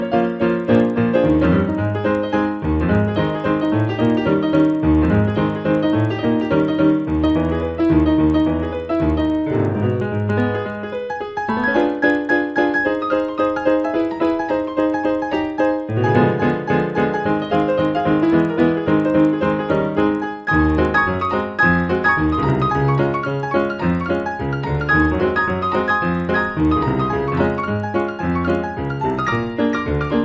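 The sample-rate converter was restarted on every block, so each block was resampled in isolation. At every block edge the converter lacked the true neighbouring samples, leaving a small error at each boundary. The blocks are 50 ms long, so these errors recur at 20 Hz throughout the clip and are heard as a steady low buzz or rapid ticking riding on the sound, present only while signal is playing. The conversion points to a step from 24 kHz down to 16 kHz.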